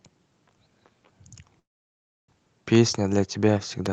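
At 1.59 s the speech stops in a call audio freeze lasting until 2.30 s. Packets were likely held up and the jitter buffer ran dry. A brief fading tail gives way to near silence. Speech then resumes where it stopped, nothing lost, now 690 ms late.

A single loud pop lands from 3.86 to 3.88 s. It peaks about 10 dB above the speech. A sudden voltage step, likely from a switch, static or driver glitch, was added. The speech continues underneath.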